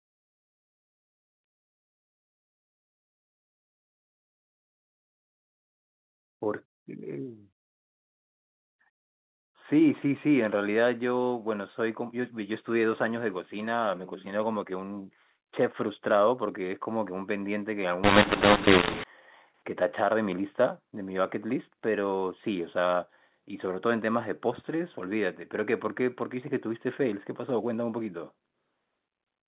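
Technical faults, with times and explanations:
18.04–19.04 s, mu-law and A-law mixed up: for this one second the telephone-coded speech, written as mu-law, is decoded as A-law, so each 8-bit code maps to the wrong level on the logarithmic scale. Loud and quiet parts swap proportions unevenly, giving a harsh, gritty distortion, and the gaps between syllables fill with hiss because the smallest codes come out far above silence. Clipping distorts only the peaks, while this fault lifts the quiet moments into noise too.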